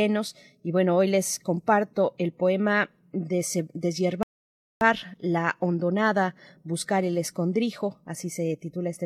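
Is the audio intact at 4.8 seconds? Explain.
No, 4.8 s falls inside a rebuffering stall from 4.23 to 4.81 s: playback starved and paused, adding 0.58 s of silence. Unlike a dropout, speech resumes exactly at "la hondonada buscar el", with nothing skipped.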